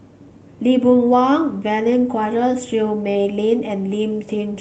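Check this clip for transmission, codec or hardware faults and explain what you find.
One transmission fault here, a short concealed packet loss in this speech, coming through a call codec whose top end stops around 8 kHz. From 3.11 to 3.17 s, roughly 40 ms of audio arrived too late, and the receiver patched the gap by extending the preceding sound before blending back, leaving a quick smeary wobble.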